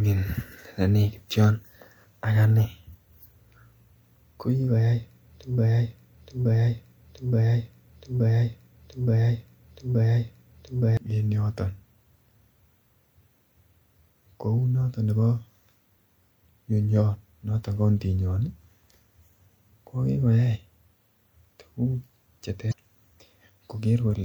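Speech recording with two faults. From 5.58 to 10.97 s, a broken-record loop repeats a 0.87 s fragment six times, likely from a stalled player or stream; the waveform shows identical blocks tiled back to back. At 22.69 to 22.73 s, damaged data in the compressed stream makes the decoder lose sync, producing a brief disruption that appears as a narrow vertical break on the spectrogram.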